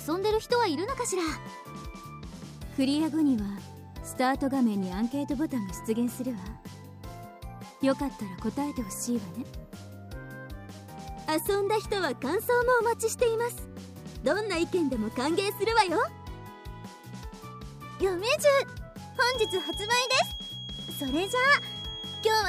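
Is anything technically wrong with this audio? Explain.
Yes, there are two problems. Single sharp clicks at 2.94 s and 18.69 s are dropped samples: likely a fraction of a millisecond missing, so the waveform jumps, too briefly to leave an audible gap. From 19.12 s to the end, a feedback whistle sits near 3.3 kHz, roughly 10 dB below the sound. It is likely a loudspeaker-to-microphone loop held just short of runaway, and its slow swelling and fading in level sets it apart from a fixed test tone.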